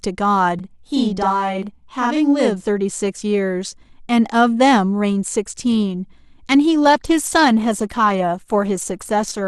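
From 0.59 to 2.66 s the speech doubles into a close slap echo: channel delay, with one channel arriving about 43 ms late, which fits a 1024-sample buffer, before the mono sum. The waveform shows each onset repeated at equal height, and the spectrogram shows comb-like notches.

At 6.76 s the quality drops suddenly, with no gap, and stays low to the end. This is an adaptive stream at a lower bitrate, consistent with a step down from roughly 64 to 16 kbit/s Opus. Codec artefacts rise through that stretch.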